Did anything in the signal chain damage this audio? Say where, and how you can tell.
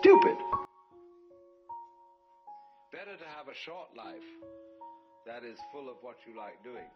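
Yes: from 0.65 s to the end the summed sound drops about 24 dB, likely one channel inverted in analogue wiring, cancelling common content rather than muting everything.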